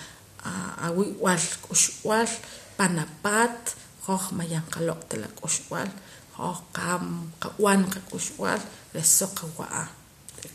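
Speech, with no audible faults.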